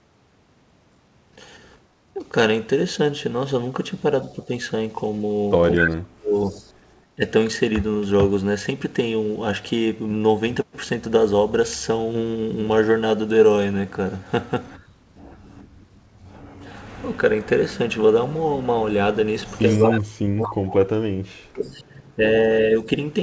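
The echo canceller most likely could not separate the near talker from loudspeaker echo during double talk and turned both down. This speech suppressed in double talk causes a slight dip of about 5 dB at 2.14–2.19 s, deep cut-outs of up to about 40 dB across 5.77–7.24 s, and about 35 dB across 19.76–22.88 s, with the speech breaking up for roughly 2.75 seconds in all.

An echo leak, likely from a loudspeaker whose echo canceller let microphone pickup through, sends back a copy of the speech 232 ms late. At 5.75–6.65 s it is about as loud as the speech itself. At 19.69–19.93 s it is about 20 dB down, and at 21.64–21.69 s it is a faint scrap about 35 dB down. The audio has no content above 8 kHz, which fits a 64 kbps G.722 call codec.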